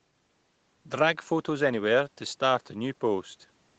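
Nothing technically wrong turns up in this bit of speech; it has simply passed through a call's microphone processing, so the very lowest bass is trimmed away and nothing sits above about 8 kHz, which is just what that path normally does.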